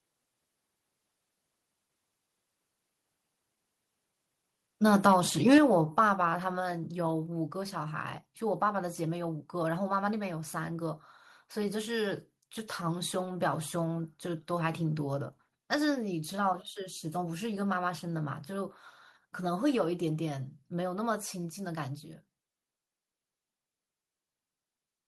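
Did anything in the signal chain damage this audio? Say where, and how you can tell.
Yes. Between 5.52 and 5.58 s the loudest peak of the speech breaks into a harsh, crackling edge, the sign of microphone overload at the converter input. The level was driven about 5 dB past full scale, so a sizeable share of the samples in that stretch sit flat against the ceiling with their tops sheared off. The likely cause is a mic input gain set too high for the talker's loudest moments.

The microphone volume stepped down twice: immediately after the clipped peak at 5.58 s the voice and background together fall by about 5 dB, then again at 6.6 s by about 3 dB. Both changes are abrupt rather than faded, and the noise floor drops along with the voice, which points to a gain change at the device rather than the talker moving away. This is likely call processing reacting to the overload by lowering the device input volume.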